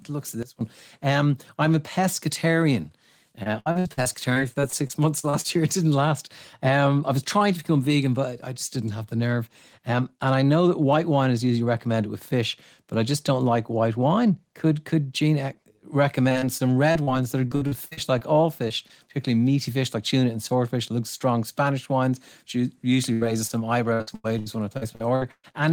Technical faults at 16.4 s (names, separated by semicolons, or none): repeated packet loss (robotic sound)